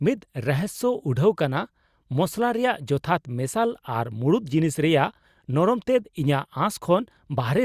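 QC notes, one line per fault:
No faults found on review; nothing to log.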